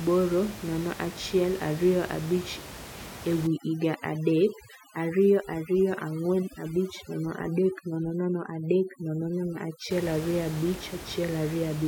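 From 3.47 to 9.91 s the background falls to near silence flecked with twinkling specks. This is overdone noise removal: a reduction setting strong enough to switch off individual frequency bands near its noise estimate, taking quiet speech detail with them, while elsewhere room noise sits about 14 dB below the speech.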